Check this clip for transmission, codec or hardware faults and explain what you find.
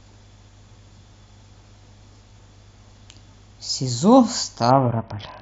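One codec fault is present: a Bluetooth SBC bit pool drop near the end of the speech. From 4.71 s until the clip ends at 5.42 s, the treble suddenly dulls and a gritty, granular noise rides on the speech. The link's encoder has cut its bit budget, which fits a fall from a bit pool of about 31 to about 6, near 55 kbps. The top sub-bands get almost no bits and the rest are coarsely quantised. Unlike a plain low-pass filter, the loss of highs comes with added grit. Unlike packet loss, the sound never drops out.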